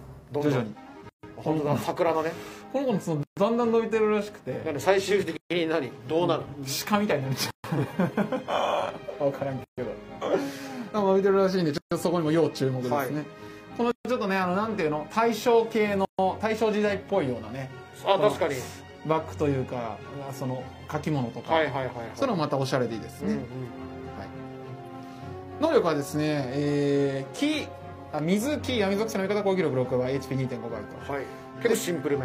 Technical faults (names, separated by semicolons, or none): gap at a join of encoded pieces